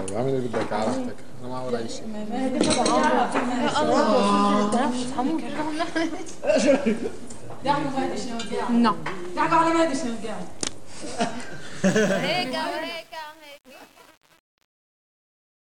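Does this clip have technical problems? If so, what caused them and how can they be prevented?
Yes, there's truncation distortion on the fade-out at the end. From 11.86 s to the end at 15.79 s, the tail gets gritty, and it's rough pretty much the whole way from 11.99 s. Whatever's doing the gain is chopping off the low bits without dither, which fits an 8-bit path. As the level sinks toward the smallest steps, the waveform collapses into coarse stairs. To prevent it, do the fade at 24-bit or floating point, and add dither whenever you reduce bit depth.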